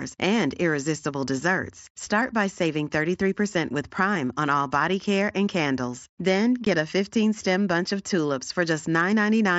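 Speech carried over a wideband mSBC Bluetooth headset link has a single dropout at 6.65 s: unconcealed Bluetooth headset packet loss. About 15 ms of audio simply vanishes, which fits two lost frames replaced by silence rather than patched over, so the sound stops and restarts with abrupt edges. A waveform would show a short flat gap with hard vertical edges, and a spectrogram a narrow blank column.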